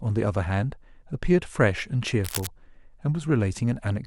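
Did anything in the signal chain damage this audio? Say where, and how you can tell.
Yes, in the analogue wiring. From 2.24 to 2.47 s, a dense, uneven burst of scratching noise sits over the speech, roughly 10 dB below it. This is cable scratch noise. The likely cause is a worn cable or connector shifting, its contact resistance fluctuating rapidly.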